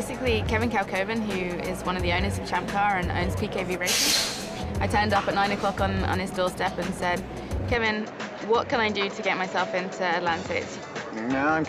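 At 7.75 s the sound changes character and stays that way to the end. Everything above 7.5 kHz disappears, so the top turns dull and boxy. There is no gap at the change. The level stays about the same. A faint new background noise appears, well below the signal. This sudden narrowing points to an input switched to a poorer device, likely another microphone or a headset's call profile taking over mid-recording.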